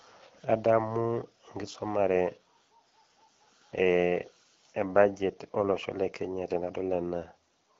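No technical faults turn up anywhere in the recording; the speech carries the slightly band-limited character of AMR wideband (HD Voice) coding at 12.65 kbit/s, a rate at which that codec leaves only light traces on the sound.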